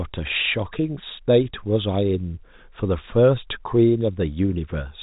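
Nothing goes wrong anywhere in this stretch of speech, which simply carries the narrow, band-limited character you'd expect from ordinary G.711 telephone coding.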